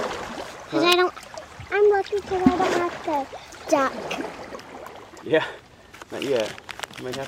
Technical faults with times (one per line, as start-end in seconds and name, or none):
0.92 electrical switching spike